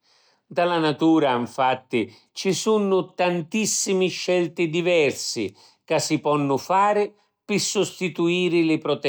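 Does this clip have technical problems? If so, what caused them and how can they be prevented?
No, nothing in this speech recording stood out as a technical problem on listening, so there is nothing here to trace to a cause or prevent.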